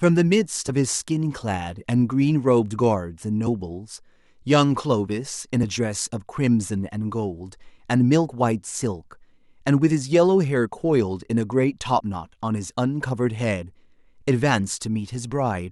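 At 0.68 s, 3.46 s, 5.62 s and from 11.98 to 12.01 s, the speech is broken by short glitches that come from damaged data in a compressed stream. Corrupted bytes made the decoder misread frames, lose sync and hunt for the next valid frame header. Each event lasts only one to two hundredths of a second.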